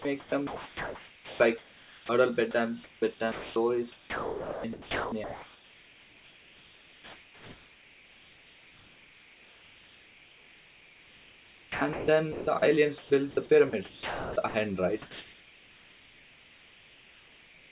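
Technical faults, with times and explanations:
Throughout: converter idle tones. A whistle near 2 kHz sits under the speech at about 19 dB below the signal and shows most in the pauses, with a grainy texture beneath quiet passages. A delta-sigma converter running without dither settles into repeating bit patterns when its input is small, and those patterns turn into a steady tone. Unlike hum or a ground-loop buzz, the pitch is not tied to mains frequency and stays high and thin.
0.02 to 13.1 s and 13.7 to 17.71 s: sound chopped by the voice detector. Across these two stretches the speech keeps cutting in and out, with about 10.2 s of the first span and 3.3 s of the second filled by synthetic noise rather than real sound. The likely cause is a sender's voice detector repeatedly deciding the input was silence and sending comfort noise in its place. Quiet syllables and word edges vanish, and the real room noise sits about 36 dB below the speech. 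That comfort-noise fill separates it from packet loss, which leaves gaps or warbly fill rather than generated noise. The call path carries the audio as 64 kbps telephone-band sound with nothing above 4 kHz.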